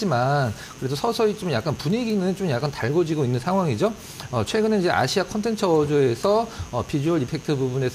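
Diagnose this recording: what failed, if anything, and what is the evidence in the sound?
The analogue wiring picks up mains buzz: a steady, raspy 60 Hz buzz about 25 dB below the signal runs throughout, its spiky harmonics reaching kilohertz.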